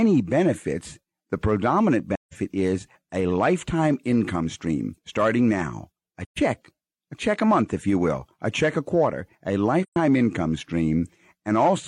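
The speech drops into soft-edged silences three times: from 2.14 to 2.35 s, just before "is a lifetime income"; from 6.25 to 6.39 s, right after "stream starting now a"; and from 9.83 to 9.96 s, after "check a quarter a". The sound fades out and back in. This is AAC frame loss with muting. The decoder zeroed the spectrum of the missing frames, and overlapping windows smeared the edges. The 128 ms gaps fit three frames and the 171 ms gap fits four.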